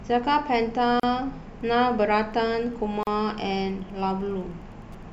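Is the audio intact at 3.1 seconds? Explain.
No. From 1.52 s to the end, a faint, steady ticking about ten times a second sits roughly 45 dB below the speech. That is Wi-Fi interference: a nearby radio's beacon, repeating every 102.4 ms, is being picked up and rectified by the audio circuit. Just before 3.1 s, from 3.03 to 3.07 s, the speech also breaks off in a 37.6 ms gap whose smeared edges leave a shorter silent part, then resumes where it stopped. This is a gap at a join of encoded pieces, which fits segments about 2 s long that were encoded separately and joined without trimming the encoder's start delay and end padding.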